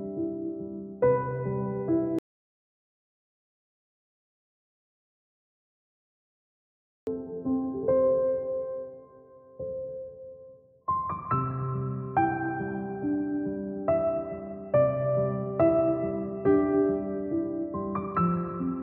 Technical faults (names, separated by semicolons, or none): audio dropout to silence